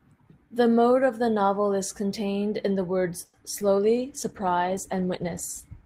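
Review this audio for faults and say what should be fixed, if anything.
Short stall from a late packet at 3.25 to 3.35 s, right after "is contained in the". The packet arrived late and the jitter buffer ran dry, so the receiver held the last sound for about 80 ms, then resumed from the same point. Nothing is lost, but that sound drags unnaturally with a faint buzz, and playback now runs about 80 ms further behind. A deeper or faster-adapting jitter buffer would absorb this lateness.

Short concealed packet loss at 3.59 to 3.62 s. Roughly 30 ms of audio did not reach the decoder in time. The receiver extended the preceding sound for about 10 ms and then cross-faded back into the real signal, so about 20 ms of the original is simply gone. This is heard as a brief smear or wobble, and any short consonant in that gap can disappear. Forward error correction or redundant packets on the link would let the receiver rebuild the gap.

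Call bitrate drop from 3.97 s to the end. The call's bandwidth estimate fell, and the encoder was pushed down to far fewer bits. The sound fits a fall from around 40 kbps to 15 kbps. It sits at the lowest rate for about 1.6 s. Over this stretch the sound turns coarse and watery, and the upper frequencies are cut away, leaving it muffled. More stable network capacity and a congestion controller that backs off less sharply would stop this.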